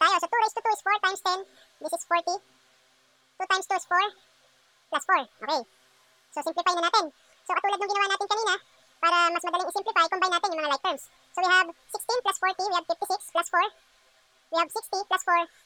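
Audio read two samples at a time throughout: each pair became one frame, so everything plays twice as fast, an octave higher.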